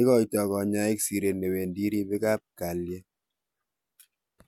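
No dropouts, clipping, glitches or other transmission or processing faults can be heard anywhere in the recording.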